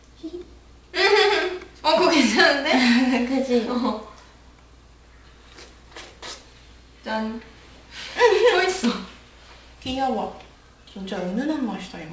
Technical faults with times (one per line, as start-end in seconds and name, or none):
0.00-12.13 aliasing